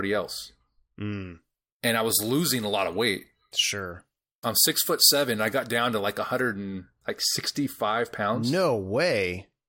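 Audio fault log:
1.12–6.54 s, pre-emphasis left on: a treble boost matching the 75 µs FM curve went in and the complementary cut never followed. Level rises from around 2 kHz upward, reaching about 13 dB above 1 kHz at 10 kHz, so the speech turns thin, glassy and hissy, with sibilants sharp. On a spectrogram the upper bands glow markedly brighter for just this span; the waveform shows spiky high-frequency detail riding on consonant bursts.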